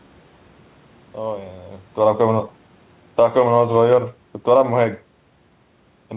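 At 3.04 s the automatic gain falling sets in: the gain control judges the input too loud and pulls its gain down by about 7 dB by 3.4 s. The speech drops in level, and the room background sinks with it, as one block.

Overlapping that, from 3.32 s to 4.18 s, automatic gain rising follows as the control decides the level is now too low and pushes the gain back up by about 3 dB. Speech and background swell together gradually, leaving the level short of where it started.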